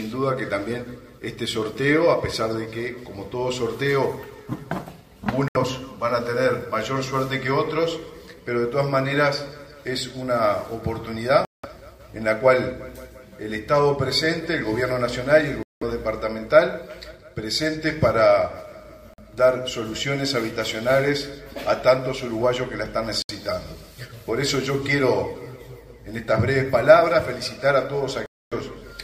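Six silent gaps cut the sound at 5.48–5.57, 11.45–11.66, 15.63–15.83, 19.14–19.20, 23.22–23.31 and 28.26–28.53 s, lasting roughly 70 to 270 ms. Each time the audio resumes further along, as though it had kept playing underneath. This is likely a Bluetooth dropout: packets reached the headphones too late and were discarded, leaving silence until valid data arrived again.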